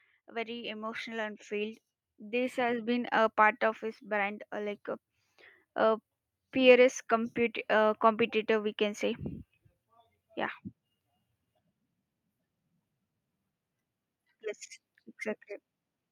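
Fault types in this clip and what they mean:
Automatic gain rising: speech and background swell together, by about 9 dB then about 5 dB, as automatic gain control slowly lifts a quiet input.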